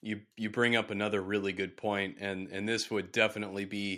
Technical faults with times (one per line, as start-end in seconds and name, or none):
none